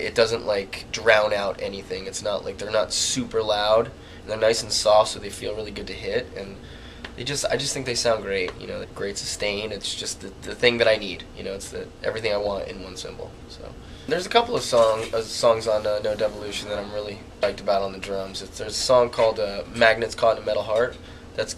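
At 8.83 to 8.85 s, 17.43 s and 21.08 s there are compressed frames skipped: chunks of the encoded stream never get decoded, so the audio jumps ahead about a tenth of a second, closer to 150 ms at 17.43 s.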